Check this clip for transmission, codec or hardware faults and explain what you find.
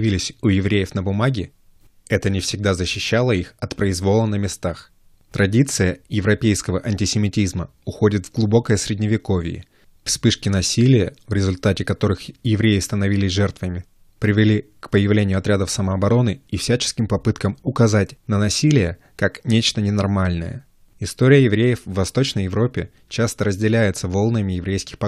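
Checking this clip turns up no faults to explain.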